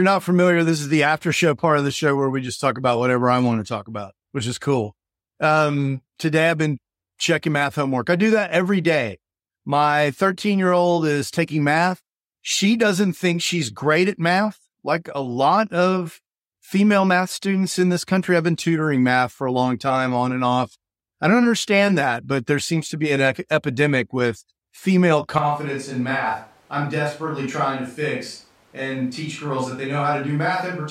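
Speech, with a switch to a distant microphone at 25.38 s, right after "epidemic with female", lasting to the end. The voice turns abruptly roomy and hollow, loses bass, drops by about 5 dB, and gains a room-noise floor roughly 35 dB below the speech. The likely cause is the close microphone's feed dropping out, leaving a farther pickup. Unlike a simple gain drop or muffling filter, the added room reflections and ambient noise give it away.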